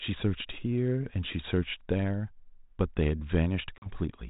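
At 3.78 s the speech hits packet loss on an ADPCM call: about 40 ms, roughly a couple of packets, drops to hard-edged silence. Unlike a plain dropout that resumes cleanly, the G.726 decoder at 32 kbit/s has lost track of the sender's adaptive predictor and step size. The speech comes back slightly distorted, and it takes until about 3.96 s to settle.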